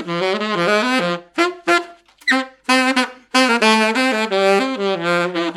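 There are no technical faults to describe in this audio.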